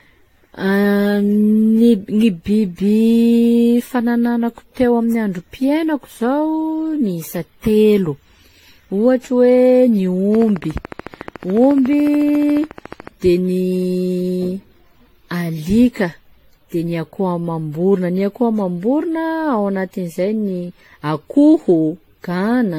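Right from the start the speech has that swirly, hollow quality of generation loss, with nothing above 16.6 kHz and smeared consonant attacks. It most likely went through a lossy codec around seven times, with something like AAC-LC at 64 kbit/s fitting, each pass piling up fresh quantisation noise.

Then from 10.35 to 13.08 s there's a train of clicks, regular ticks at 13.9 per second, around forty of them, peaking about 10 dB above the speech and audible in the gaps too. That's likely interference or a faulty connection injecting pulses.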